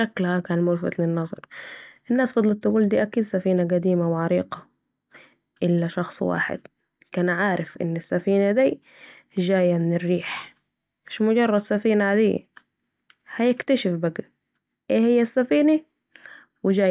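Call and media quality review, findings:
No faults found: the speech signal is continuous and stable, with no dropouts, level jumps, distortion or timing irregularities audible anywhere in the recording.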